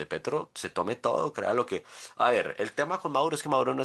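Throughout the speech there is clock drift between sender and receiver, with the sending end's clock running about five percent fast. Because audio arrives slightly quicker than the receiver plays it out, the jitter buffer keeps creeping toward overflow. The receiver has to keep shedding material to hold its latency steady. The result is a faint, persistent unevenness in the flow of the speech rather than any single obvious glitch.

From 0.09 s to 3.81 s the receiver makes repeated timing corrections to keep pace, trimming short slices of audio so that playback runs at an effective 104% of normal speed. The cuts all go the same way, discarding material, but fall at irregular spacing. Each one is brief, so at most it registers as a small hiccup or a slight stumble in rhythm, or overall as a subtly rushed, unsteady tempo.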